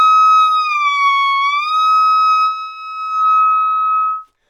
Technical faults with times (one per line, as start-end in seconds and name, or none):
none